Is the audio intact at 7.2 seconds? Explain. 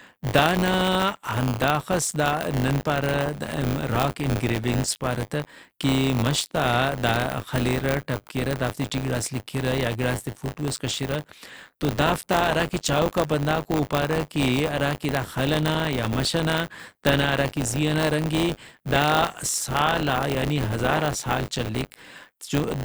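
No, at 7.2 s you're hearing buffer tearing, and it runs through the whole clip rather than just that moment. The writer and the hardware reader of the ring buffer have drifted until they cross inside every period. About a tenth of each buffer replays speech from roughly 20 ms earlier, with hard joins on both sides. That produces a steady robotic buzz at 100 Hz, which points to a buffer period of around 10 ms. It rides on the speech and goes away when there's no signal.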